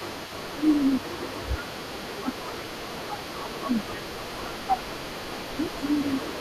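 From the start and throughout, an echo leak is audible: a faint copy of the speech returns about 0.4 s late, about 20 dB below the direct signal. This is likely a far-end loudspeaker echo that the echo canceller failed to fully remove.

Speech suppressed in double talk occurs from 0.52 to 1.36 s, 1.56 to 2.73 s, 2.9 to 4.73 s and 5.52 s to the end. The speech repeatedly dips by roughly 15 to 20 dB, likely because the canceller could not separate local speech from echo and attenuated both.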